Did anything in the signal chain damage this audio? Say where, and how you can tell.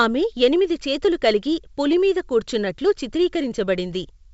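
No, nothing in the chain has damaged this speech. It has passed through G.722 wideband telephone coding at 64 kbit/s, the codec's highest rate, where the coding leaves at most a faint trace.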